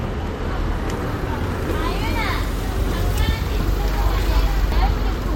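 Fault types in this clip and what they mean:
Dropped buffer (overrun): at 1.52, 3.6 and 4.72 s the sound skips ahead, losing roughly 40 ms twice and about a tenth of a second last, likely from samples overwritten before being read. Unlike an underrun, no silence is inserted.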